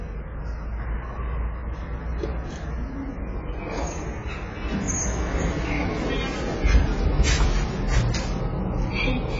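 From start to finish, nothing is present above 7.6 kHz, and the sound is dull and smeared, with a warbling, fizzy texture on sustained parts. This points to heavy AAC compression, likely AAC-LC at a bitrate around 16 kbps, which quantises coarsely and lowers the cut-off.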